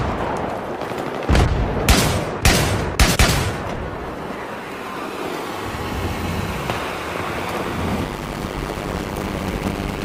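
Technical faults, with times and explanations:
1.47–7.25 s, call bitrate drop: the encoder falls from 64 to 24 kbps, sounding coarse and muffled for about 4 s at worst, degraded continuously rather than broken by gaps.
8.04–10.04 s, block size mismatch (padded): zero-filled gaps in every block buzz at 100 Hz, fitting 256-sample writes; playback slows to 0.533× yet keeps its timbre, unlike resampling.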